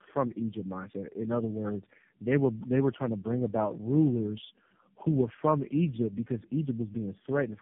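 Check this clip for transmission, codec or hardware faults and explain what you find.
Yes, one fault, running the whole way through: tandem speech coding. The speech sounds re-encoded by roughly three low-rate codecs in a row (fitting G.729A then two AMR-NB hops), each compounding the last, so it's rough, muffled and warbly, with nothing above 3.7 kHz.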